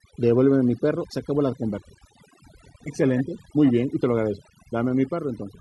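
Overdone noise removal runs through the whole speech recording, from start to finish. A noise reduction stage was pushed far too hard: any frequency band sitting near its noise estimate gets pulled down or shut off entirely, and the quieter components of the voice fall below that line and vanish with it. The background collapses into near silence sprinkled with twinkling specks.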